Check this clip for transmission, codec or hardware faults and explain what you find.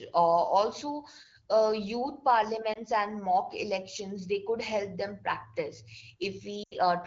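Two short dropouts point to lost AMR speech frames, heard over AMR wideband (HD Voice) coding that sounds clear at what fits 12.65 kbit/s.

At 2.73 to 2.78 s and 6.63 to 6.75 s, frames failed their checks and the decoder extrapolated with falling gain, first a brief warble, then a longer fade.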